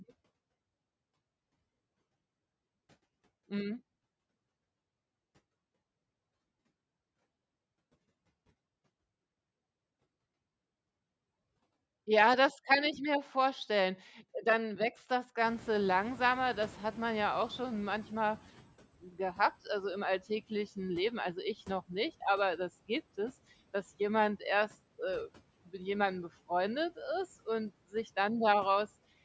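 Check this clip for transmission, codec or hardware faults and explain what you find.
One processing fault is audible, from the call's noise suppressor rather than the codec or hardware.

Noise suppressor catching up, 15.45 to 18.72 s: room noise jumps by about 21 dB just after 15 s. The suppressor's noise estimate lags, so the noise first passes with less reduction. It then sinks by about 12 dB over 3.27 s as the estimate adapts. On a spectrogram, a bright broadband noise floor appears and fades gradually. The waveform shows a thickened baseline tapering down.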